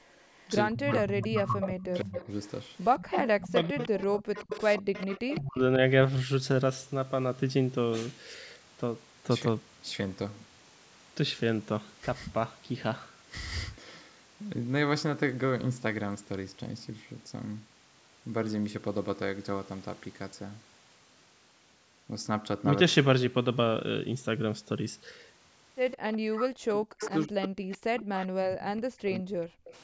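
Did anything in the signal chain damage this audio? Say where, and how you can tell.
Yes. The damage happens in call processing, at the echo canceller. In two places, 0.0–5.38 s and 25.91–29.73 s, a faint second copy of the speech trails the original by a fixed 156 ms, about 10 dB lower. This is an echo leak, likely loudspeaker pickup that the canceller left uncancelled. Room reverberation would decay smoothly instead of repeating as a distinct delayed copy.

The same stretches, 0.7–5.61 s and 26.3–29.62 s, also show speech suppressed in double talk. While both sides speak, the talker's level pumps down in pieces, by around 30 dB in the first stretch and around 40 dB in the second, roughly two and three seconds in total. The likely cause is the canceller mistaking the talker for echo. Network loss would leave abrupt gaps at random moments, not gain ducking tied to overlapping speech.

Between 4.24 and 4.93 s the background is gated by the echo canceller. 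The room tone briefly drops by about 25 dB, roughly 150 ms in all, and returns once the canceller releases. Here the ambient bed drops out, not the talker, which separates it from double-talk suppression.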